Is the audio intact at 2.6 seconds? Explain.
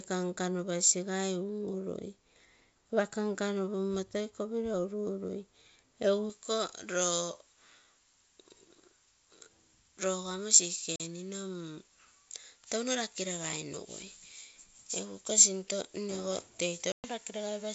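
Yes, the speech at 2.6 seconds is intact, with no fault at that moment, only the wideband G.722 telephone coding at 64 kbit/s leaving at most a faint trace.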